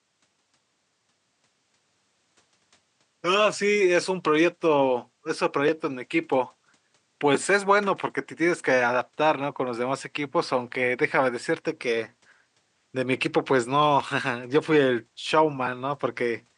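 No technical faults heard.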